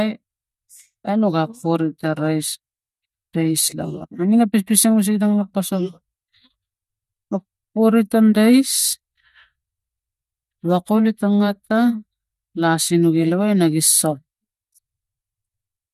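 Nothing goes wrong anywhere along the way in this bit of speech, so there's no technical fault to point to at any moment.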